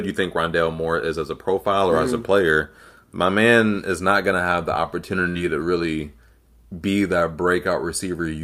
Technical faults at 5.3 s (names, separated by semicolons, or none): burst of packet loss